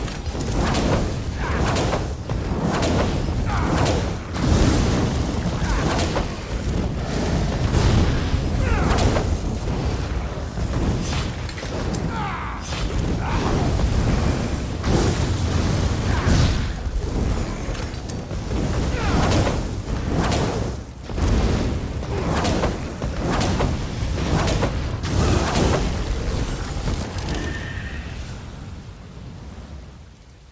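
From 16.93 s to 24.93 s the audio carries a steady buzz at 100 Hz that rides on the signal and drops away whenever the signal does. This is a resampler restarted on every block: the 48 kHz to 16 kHz conversion was run separately on each 10 ms block, so the filter had no real neighbouring samples at the block edges. Each edge leaves a small discontinuity, and at 100 per second those ticks fuse into a buzz.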